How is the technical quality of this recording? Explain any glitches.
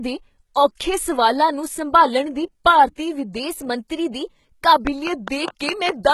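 The recording has three problems: codec damage throughout, a pitch and speed jump, and a burst of clicks near the end.

HE-AAC compression, throughout the clip, is the likely cause of the damage. The codec stores only the lower spectrum and rebuilds the treble by copying lower bands upward under a coarse envelope, so harmonics above the crossover don't match the originals. The damage is heavy, with nothing above 11.8 kHz, which fits a bitrate around 16 kbps. Sibilants in the speech come out gritty, metallic or lisping.

A drift correction step runs from 3.40 s to 4.72 s. Software reconciling two clocks likely changed the playback rate in a single step to refill or drain its buffer, here by 6.15 percent. Speed and pitch move together, so the speech shifts upward by 103 cents, about a semitone, and plays faster for those 1.3 seconds. It then snaps back to its original rate and pitch at 4.72 s.

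A train of clicks follows from 4.87 s to 6.11 s, roughly seven clicks at a regular 4.9 per second. Pulses like this likely come from interference from nearby equipment or a faulty connection or power supply. The clicks share much the same shape and stand roughly 10 dB above the speech. They are heard as steady ticking laid over the end of the clip.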